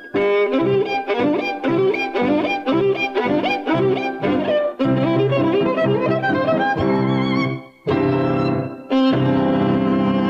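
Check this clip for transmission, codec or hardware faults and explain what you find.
Nothing stood out on listening; no transmission, codec or hardware problem is evident anywhere in the clip.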